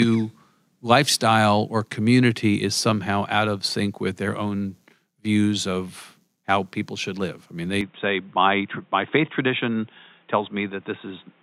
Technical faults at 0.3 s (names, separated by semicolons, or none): none